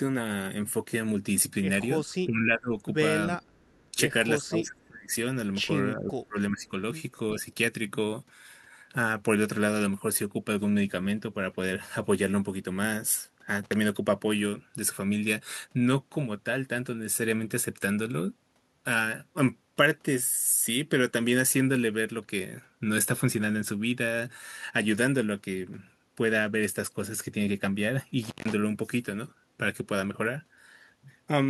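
Speech suppressed in double talk at 2.02–2.78 s, 3.27–3.44 s, 4.37–5.12 s and 5.94–6.79 s: the voice dips by about 15, 20, 30 and 30 dB. This is likely an echo canceller turning everything down while both sides talked.

Echo leak at 3.49–3.9 s: a faint copy of the voice returns about 385 ms later at roughly 40 dB below, likely loudspeaker pickup the canceller missed.

Intermittent contact at 13.63–13.74 s and 28.22–28.54 s: a loose connection opens for about 51 ms and then 153 ms, cutting the sound with crackle at each edge.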